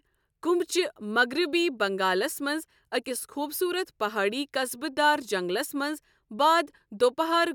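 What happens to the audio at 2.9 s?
Nothing goes wrong at 2.9 s; the speech carries on intact through that moment, with no dropout, click or distortion.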